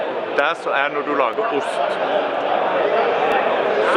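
A tiny skip lands at 1.33 s and again at 3.32 s: overlap between stream segments, where overlapping 2-second segment timestamps made playback discard a few milliseconds of sound.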